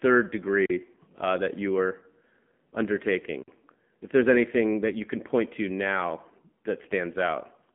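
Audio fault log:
throughout: AMR narrowband mobile codec. The speech sits in a narrow telephone band of roughly 150 Hz to 3.4 kHz, with nothing above 3.4 kHz, and the codec damage is plainly audible. Each 20 ms frame is rebuilt from a vocal-tract model driven by a few pulses, so the voice takes on a buzzy, synthetic edge. That edge is what separates it from a simple band-limiting filter. The degree of buzz fits a middle mode of around 7.4 kbps.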